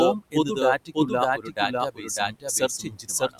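A speech recording carries a doubled audio track from start to finish. A second full-band copy of the same speech runs roughly 0.7 s behind the original at about the same level. It has no added decay or room colour, so it reads as a clean, out-of-step duplicate rather than an echo. The likely cause is the audio being captured a second time through a slower path, or an edit leaving two misaligned copies stacked together. There is also speech cut by the noise suppressor in four spans: 0.20 to 0.57 s, 0.78 to 1.12 s, 1.37 to 1.74 s, and 1.91 s to the end of the clip. In each, parts of the speech were judged to be noise and pulled down with the background, by up to about 17, 18, 16 and 18 dB respectively, leaving those stretches sounding swallowed and faint. The affected portions are brief in the first spans and grow longer toward the end, with the final span losing the most speech. The room noise sitting about 22 dB below the speech belongs to the recording itself.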